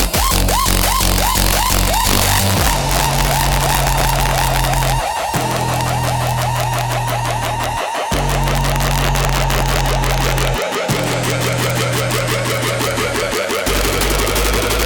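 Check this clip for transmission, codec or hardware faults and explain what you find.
Integer overflow runs through the whole clip. The signal is driven about 4 dB past full scale, and instead of being limited, the peaks wrap around to the opposite sign. Around one percent of samples are affected, so the loudest moments break into sharp, violent cracks, far harsher than ordinary clipping.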